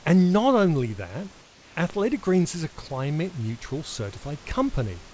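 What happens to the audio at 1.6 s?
From 1.42 to 1.76 s, right after "not only that", the room background turns into a smooth, featureless hiss about 3 dB quieter than the surrounding ambience, and the detail of the real background returns only when sound resumes. This is most likely comfort noise in place of the background. The sender's voice detector treated the pause as silence and stopped transmitting, and the receiver filled those 340 ms with synthetic noise roughly matched to the background's spectrum.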